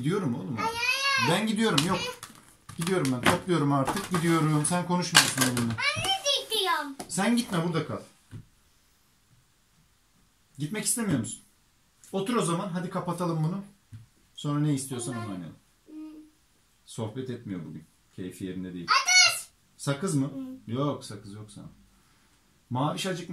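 At 16.88 s there is a sudden jump in the sound. About 4 ms is missing, with no silence. This is a dropped buffer (overrun). The hardware likely overwrote those samples before the program read them. The two sides were joined directly.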